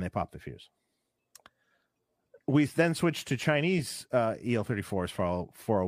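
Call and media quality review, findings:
No faults found in this speech clip. No defects heard at any point.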